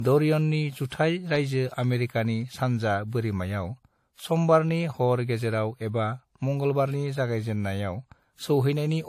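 The speech was most likely passed through more than one lossy codec, with each re-encode treating the previous one's artefacts as real signal to be coded. Throughout the clip this shows as transcoding between lossy codecs: nothing survives above 15.2 kHz, and the coding artefacts of one generation sit layered over another's. The mix of artefacts points to a WMA encode at around 64 kbit/s followed by AAC-LC at around 48 kbit/s.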